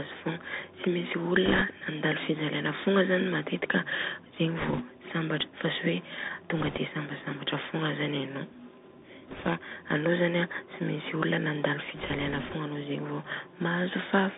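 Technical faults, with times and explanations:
Throughout: Bluetooth CVSD headset codec. The speech passes through a narrowband headset link that fits 64 kbps CVSD. Each sample is sent as a single up-or-down bit, and the step size adapts to follow the waveform. The line band runs from about 200 Hz to 3.7 kHz, so the top end is gone. The codec damage is plainly audible. S sounds turn scratchy, and a fine granular hiss sits under the speech.
1.46–1.62 s, 4.59–4.84 s, 6.57–6.78 s, 9.27–9.47 s and 11.96–12.56 s: bit errors on a Bluetooth voice link. In these five stretches, bits on the headset link were flipped. The error rate is a few percent, roughly 4% in the first and roughly 2% in the longest, last one. Each CVSD bit carries only a small step, and the error fades quickly. So there are no sharp clicks. Instead, a rushing, crackly noise rides over the speech for a fraction of a second.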